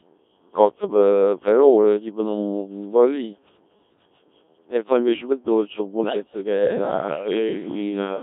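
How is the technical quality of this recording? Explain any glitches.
Technical quality is poor: the whole recording has passed through a very low-rate vocoder, and two events near the end add further damage.

Codec 2 vocoder, throughout: at 1.3 kbit/s only pitch, voicing, energy and a coarse spectral envelope survive, and the decoder rebuilds speech from sine waves. The result is robotic and buzzy, with heavy damage and a narrow band of roughly 250 Hz to 3.7 kHz.

Bit errors on digital voice radio, 6.01 to 6.20 s: corrupted bits, around one in ten, fed the vocoder wrong parameters for the few frames in this short stretch. Pitch, level and tone colour jump abruptly, breaking into warbling, garbled bleeps for about 0.19 s.

Switch to a distant microphone, 6.61 s to the end: the sound turns suddenly roomy and hollow, with thinner bass, though the level barely changes and room noise sits roughly 35 dB below the speech. 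The likely cause is a changeover from the close microphone to one further away.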